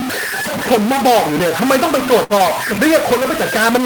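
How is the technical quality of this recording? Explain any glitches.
Poor. Distortion runs through the whole recording, with hiss filling the pauses, and the speech is interrupted once just past the middle.

Throughout, the distortion and the noisy gaps point to a stuck bit, likely one converter bit jammed at a fixed value.

From 2.23 to 2.33 s, a burst of packet loss leaves the last sound held and fading for about 60 ms, then speech resumes with roughly 60 ms skipped.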